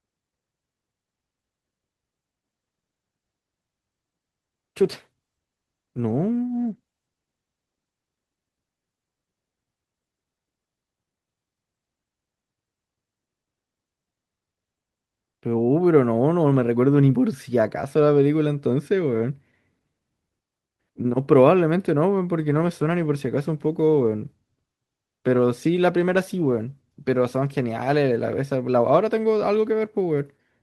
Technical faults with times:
2.50-8.97 call bitrate drop
22.38-28.41 call bitrate drop

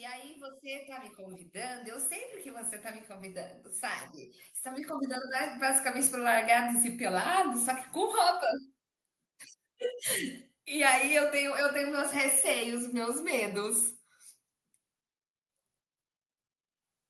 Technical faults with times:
0.44-3.55 automatic gain rising
4.62-6.43 automatic gain rising

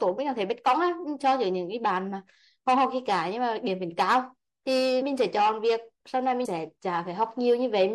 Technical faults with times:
0.00-7.94 MP3 compression
5.00 compressed frames skipped
6.44 compressed frames skipped

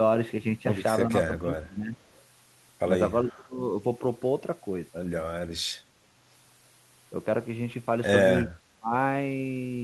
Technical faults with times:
1.08-1.98 speech suppressed in double talk
1.99-2.23 echo leak
3.22-3.59 speech suppressed in double talk
8.44-8.93 speech suppressed in double talk

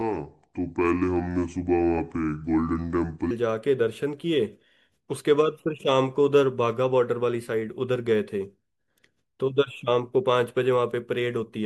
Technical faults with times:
0.00-3.31 section at the wrong speed

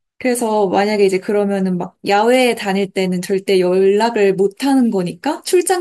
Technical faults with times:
none

